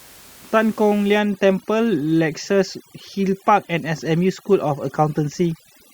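From 1.19 s to the end of the clip, overdone noise removal takes hold. A noise reduction stage set far too aggressively is cutting individual frequency bands whenever their level sits near its noise estimate, and the softer parts of the speech fall below that threshold along with the background noise. The background collapses to near silence dotted with twinkling specks. Before that point, the room noise sits about 26 dB below the speech.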